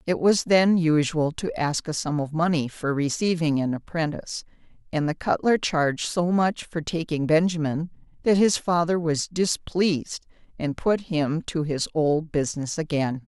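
No technical faults turn up anywhere in this speech recording, so there's nothing to point to along the way.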